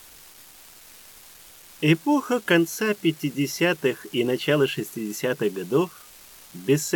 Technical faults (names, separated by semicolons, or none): unreliable data bit